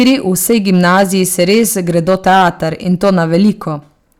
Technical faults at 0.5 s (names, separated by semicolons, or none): hard clipping